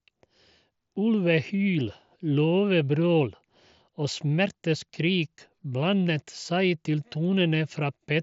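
No technical faults can be heard in this speech, which comes over a Bluetooth mSBC headset link with nothing above 7.7 kHz.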